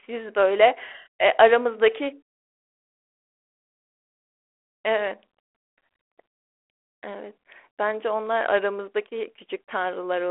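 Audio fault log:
No fault in this audio.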